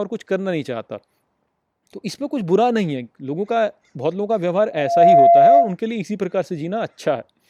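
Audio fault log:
4.71 to 5.75 s, loudspeaker feedback squeal: a steady 687 Hz tone swells over about a third of a second to roughly 10 dB above the speech as the microphone-to-speaker loop exceeds unity gain; unlike mains hum, it is a single non-harmonic pitch that builds from nothing.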